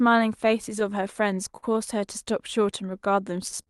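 Throughout the speech the pacing feels faintly uneven, a sign of clock drift between sender and receiver, with the sender's clock running roughly 4% slow against the receiver's. From 0.10 to 3.21 s the tempo sags slightly, to about 98% speed, with small hiccups. These are repeated timing corrections: the receiver repeats short pieces, adding around 50 ms, to stay in step. At 1.57 to 1.64 s a sound hangs on for 57 ms with a slight buzz or dip. This is a short stall from a late packet: the jitter buffer ran dry and the last sound was stretched until the packet arrived, with nothing lost. A similar held-over sound comes at 3.63 to 3.69 s, lasting 42 ms. All of this comes through an Opus call path with audio up to 12 kHz, which fits a bitrate around 40 kbps.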